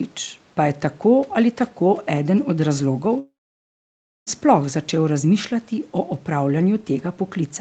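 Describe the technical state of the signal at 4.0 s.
At 4.0 s the signal sits inside a long network dropout, running from about 3.19 s to 4.30 s. No audio arrives for roughly 1.1 s, likely because packets were lost in transit. The receiver first extends the last speech sound as a fading buzz. That dies away within a few tenths of a second, and most of the gap, about 0.95 s, is plain silence. So 4.0 s is silent. Speech resumes at 4.30 s, and the missing portion never returns.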